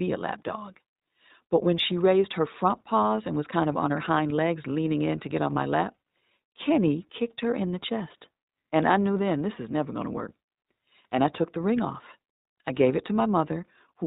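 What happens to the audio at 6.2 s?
At 6.2 s the speech carries iLBC codec damage, as it does throughout. Each 20 ms frame is coded independently, which fits the 15.2 kbps mode, giving a rough, synthetic timbre. A spectrogram shows nothing above 4 kHz.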